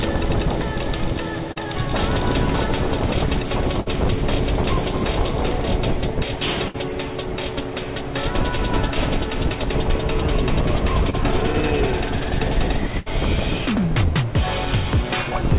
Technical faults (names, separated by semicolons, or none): short concealed packet loss; burst of packet loss